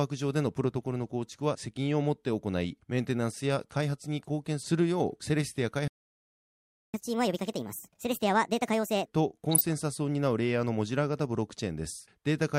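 A speech recording with three transport and reception faults. At 5.88 s the audio cuts to silence for about 1.06 s, resuming at 6.94 s. This playback stall most likely comes from the player running dry of buffered data or having its output thread blocked. From 6.94 to 9.06 s the speech runs at 1.5 times normal speed, with pitch raised by roughly seven semitones. This is catch-up at higher speed: the player resamples its backlog to recover the lost second, then drops back to normal rate. From 9.44 to 9.73 s the speech is overlaid with short blips of noise, the signature of DAB burbling. Uncorrected bit errors at a low fraction of a percent corrupt samples, so individual sub-bands get short blips of noise. The span fits roughly a dozen MP2 frames.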